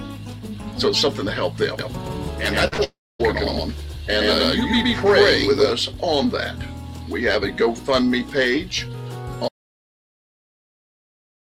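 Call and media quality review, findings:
Doubled audio track, 1.79–5.71 s: second full-band copy about a tenth of a second behind, at about equal level, starting and stopping abruptly. Likely cause: a second capture path or misaligned edit. Unlike room echo, it has no decay or reverberant colouring.

Short concealed packet loss, 2.67–2.74 s and 2.74–2.80 s: back-to-back brief smears/wobble. Each covers about 40 ms of missing audio, patched by the jitter buffer/decoder extrapolating the last sound. Unlike a dropout, there is no audible gap or silence.

Long network dropout, 2.84–3.21 s: about 360 ms never played. Receiver concealment stretches the last sound into a fading buzz/hiss, then roughly a quarter second of near-silence before audio resumes further on. Likely cause: a network outage. Unlike a dead input, the gap begins with a decaying concealment tail.

Audio dropout to silence, 9.48 s to end: hard cut to silence with no room tone and no fade. 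Likely cause: lost capture input (device disconnect, failed link or mute) while the encoder keeps writing. Unlike a network dropout, there is no concealment smear.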